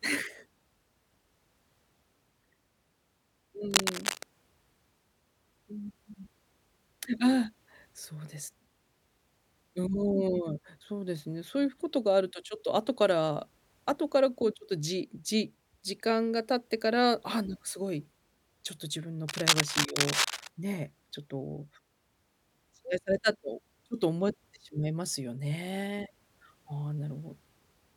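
Cable scratch noise at 3.71 to 4.23 s and 19.28 to 20.47 s: dense, ragged scratching and rustling bursts sit over the speech at roughly its own loudness, likely from a worn cable or connector being moved so its contact resistance jumps erratically.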